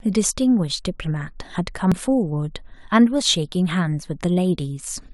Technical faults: compressed frames skipped

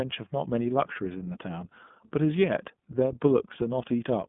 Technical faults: iLBC codec

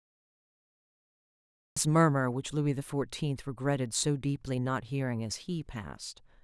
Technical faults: cut-off start

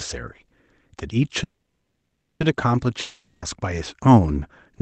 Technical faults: call audio freeze; long network dropout

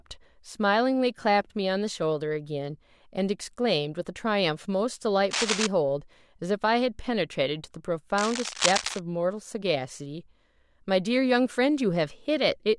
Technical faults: cable scratch noise

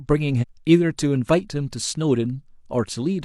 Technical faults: damaged data in a compressed stream

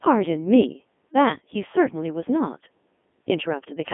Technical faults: Codec 2 vocoder

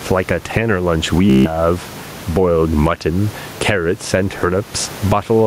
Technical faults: gain pumping; Bluetooth stutter

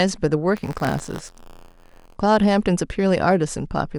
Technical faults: buffer tearing

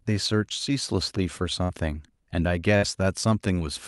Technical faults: burst of packet loss

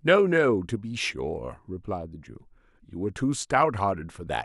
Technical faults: none

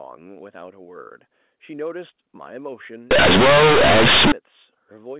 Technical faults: companded audio read as linear

